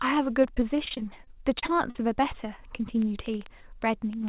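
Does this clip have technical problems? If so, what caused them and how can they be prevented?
Yes. From 0.44 to 1.98 s there is repeated packet loss, and it gives the speech a robotic sound. Twelve short gaps occur in that stretch. The longest lasts about 42 ms. Each gap is filled by stretching the sound just before it, so the speech turns choppy. About 14% of that span is patched this way. Prevent it with a steadier network connection and a larger jitter buffer.

From 3.02 s to the end there is a train of clicks. The ticks come about 6.7 times per second at an uneven pace. They peak roughly 5 dB above the speech and sit on top of it. The likely cause is electrical interference from nearby equipment or a faulty connection or power supply. Prevent it by moving the device away from noisy equipment, reseating cables, or using a steadier interface.

All of this passes through a narrowband call codec with nothing above 4 kHz.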